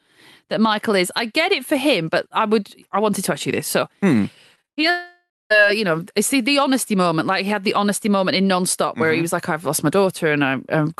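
From 4.55 to 4.84 s the speech breaks up with repeated packet loss, giving a robotic sound: five short holes, the longest about 56 ms, each patched by stretching the preceding sound, so nearly half of that 0.29 s span is concealment rather than real speech. It sounds choppy. On a spectrogram the harmonics turn into smeared, repeated bands with abrupt seams, and the waveform shows looping, overly regular cycles between the breaks.

At 4.90 s, just after that, comes a long network dropout, the likely cause of a gap lasting until 5.52 s. About 0.6 s of speech is lost. The receiver first extends the last sound as a fading buzz or hiss, then leaves roughly 210 ms of near-silence before the audio resumes without the missing part. On the waveform this appears as a decaying tail followed by a flat stretch. The spectrogram shows smeared energy dying away into an empty band, all of it sitting below the 12 kHz ceiling left by the call codec.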